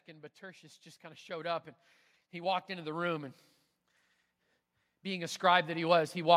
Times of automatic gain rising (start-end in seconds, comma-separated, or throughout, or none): 0.05-1.69, 2.31-3.39, 4.90-6.32